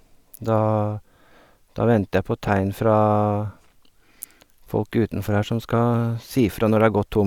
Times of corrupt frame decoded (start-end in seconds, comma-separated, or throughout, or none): 2.47-2.49